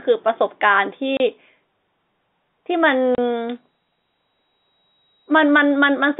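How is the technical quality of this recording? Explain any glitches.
The recording is telephone-band speech with two short dropouts and a high whistle in the second half. Audio runs through G.711 A-law coding, so it sits in a narrow band of about 150 Hz to 3.7 kHz.

Packet loss filled with silence occurs at 1.17 s and again at 3.15 s. Each gap lasts 30 ms. Each length fits a single lost packet. The receiver had nothing to play for that slot, so it inserted silence. The speech stops abruptly and resumes just as abruptly. These are brief holes with hard edges, not fades.

A feedback whistle starts at 3.44 s and continues to the end of the clip. It is a tone at 3.8 kHz that swells and fades slowly, sitting roughly 15 dB below the speech. The likely cause is a loudspeaker-to-microphone loop held just short of full feedback. One frequency keeps ringing without building into a howl. It is heard as a thin, single-pitch whistle behind the speech.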